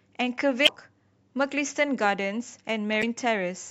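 At 0.64–0.69 s and again at 2.99–3.04 s, damaged data in the compressed stream produces a short glitch of roughly 40 ms in the speech. Corrupted bytes make the decoder misread frames, lose sync and hunt for the next valid header.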